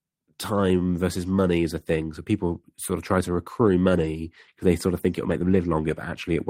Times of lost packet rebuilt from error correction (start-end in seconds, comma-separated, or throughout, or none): 3.89-4.07, 5.29-5.59